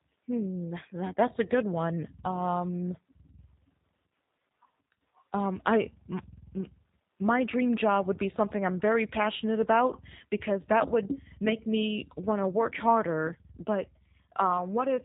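From start to finish the speech has been through a G.729 codec, and the damage is plainly audible. Everything above about 3.8 kHz is simply gone, so it has that boxed-in telephone sound. The codec doesn't keep the waveform; it rebuilds speech from a vocal tract model, a pitch predictor and a handful of pulses per frame. That leaves it rough and slightly synthetic, and the thinness points to 8 kbit/s G.729A.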